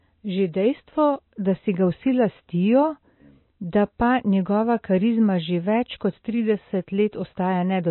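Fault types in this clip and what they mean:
MP3 compression: throughout the speech, nothing sounds above 4 kHz and the damage is plainly audible, likely from an MP3 encoder short of bits, which fits about 24 kbps. It cut the treble at a fixed point and dropped weak frequency lines, leaving a watery texture.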